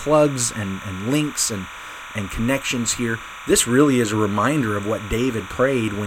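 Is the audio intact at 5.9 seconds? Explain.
No. Timecode bleed runs through the whole speech clip, including 5.9 s: linear timecode at 30 frames per second is leaking in from an adjacent track or cable, its square wave flipping between roughly 1 and 2 kHz. That adds a steady chirping warble sitting about 15 dB under the speech.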